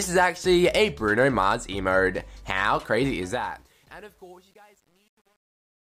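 From 3.07 s the fade-out shows truncation distortion on a fade: undithered steps, fitting a 9-bit stage, turn gritty from 3.67 s on.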